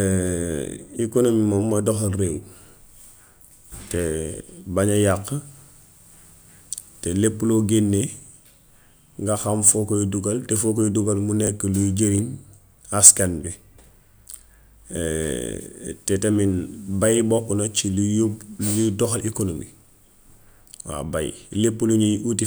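A 10 ms chunk of speech arrives three chunks late, so the chunks play out of order at 11.44 to 11.48 s and 12.15 to 12.19 s, each a brief jumbled stutter.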